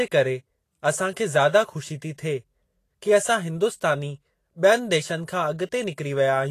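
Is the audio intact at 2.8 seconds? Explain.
No. At 2.8 s, as across the whole clip, the speech carries Vorbis compression damage, likely from a low-bitrate encode around 34 kbps. The codec keeps a smooth spectral floor and quantises the detail above it so coarsely in the treble that fine structure turns into noise of similar energy, and nothing survives above about 14.2 kHz. The result is a plainly audible hissy, grainy top end, roughened tones and softened consonant attacks.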